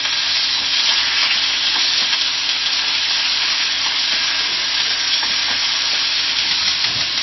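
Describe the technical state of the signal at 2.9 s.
At 2.9 s the sound carries MP3 compression damage, present throughout the clip rather than at that moment alone. Everything above 5.8 kHz is gone, and the plainly audible watery, swirling texture, with smeared attacks, points to a very low bitrate, likely around 24 kbps, where the encoder drops the treble and switches weak frequency lines on and off between frames. A spectrogram shows a flat ceiling at 5.8 kHz and blotchy, flickering patches below it.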